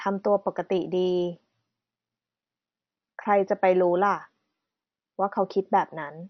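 Likely MP2 compression starved of bits, switching off upper sub-bands, so the speech is dull, nothing above about 6.2 kHz, with gurgling, granular distortion throughout.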